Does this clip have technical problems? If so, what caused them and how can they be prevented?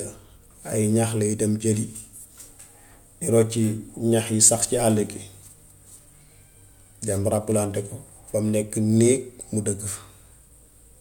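No, nothing here calls for a fix or a preventive step.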